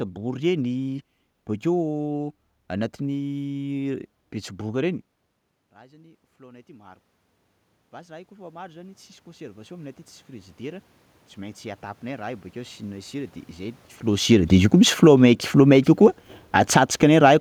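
Speech in which the automatic gain rises from 5.74 s to 17.36 s. Just before it, around 5 seconds, the talker moves away and the input drops by about 24 dB, so the gain control slowly lifts its gain by about 11 dB. Voice and room noise swell together, and the waveform envelope and the spectrogram's noise floor climb steadily with it. Around 13.5 s the talker moves again, and from 14.15 s to 17.26 s the automatic gain falls by about 8 dB. The sound sinks along with its background, so the waveform peaks taper down and the spectrogram fades evenly across all frequencies.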